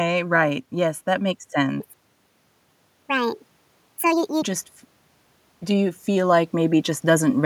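From 1.80 to 4.42 s, a section plays at the wrong speed. It runs 1.59 times faster than it was recorded. Pitch and pace shift together, so the speech jumps up by roughly seven semitones and sounds high and hurried. The change is abrupt at both ends, with normal speed returning at 4.42 s. The likely cause is an editor or player handling this stretch with the wrong clock rate.

From 5.6 to 7.4 s, the automatic gain is rising. The control judged the input too quiet and pushed its gain up slowly. Over nearly two seconds the level climbs by about 4 dB. Speech and background noise swell together. No single step can be heard, just a steady lift in loudness toward the end of the clip.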